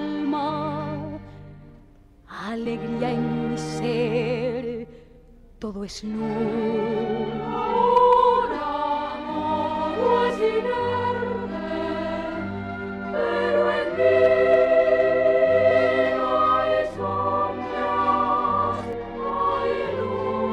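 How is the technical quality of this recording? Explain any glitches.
Five short glitches break up the sound, at 0.49, 2.65, 10.29, 15.70 and 18.93 s. Each lasts under 20 ms. They come from damaged data in a compressed stream. Those spots in the file were corrupted, so the decoder could not read the affected frames, lost sync and jumped to the next valid frame header. That produces the brief glitch.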